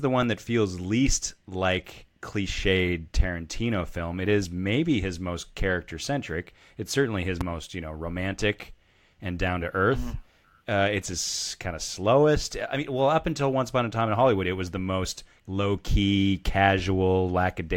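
A speech clip with one loud pop from 7.41 to 7.43 s, between "certainly his" and "you know romantic and". The single sharp transient sits roughly 10 dB above the speech, which continues underneath it. The likely cause is a sudden voltage step or pulse from a plug, switch, static discharge or driver glitch entering the signal chain.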